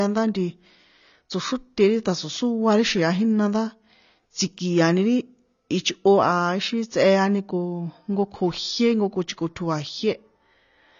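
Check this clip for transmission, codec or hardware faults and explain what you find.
There's one fault, and it runs the whole way through: AAC compression. The speech has nothing above about 6.9 kHz, so it sounds dull, and the codec damage is plainly audible as smeared, warbly texture on held sounds and a fizzy edge on sibilants. The likely cause is an AAC-LC encode at a low bitrate, which fits something around 24 kbps. With that few bits, the encoder drops the top of the band outright and quantises the rest coarsely, leaving holes in the spectrum.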